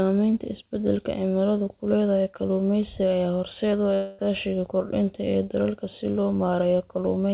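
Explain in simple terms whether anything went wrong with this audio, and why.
At 3.94 s the speech breaks off for about a quarter of a second, until 4.21 s. A fading buzz briefly stands in for it, and the speech resumes with that piece missing. This is most likely a long network dropout.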